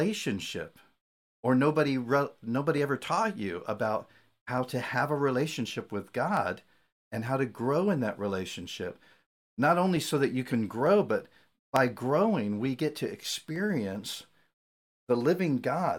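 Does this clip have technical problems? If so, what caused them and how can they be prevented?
Yes. Clock drift buffer slips, likely from two devices running on independent clocks around 400 ppm apart, drop or repeat a small block of samples, causing clicks every 0.9 s from 0.98 s to 15.35 s. Locking both devices to a shared word clock or using asynchronous sample-rate conversion prevents this.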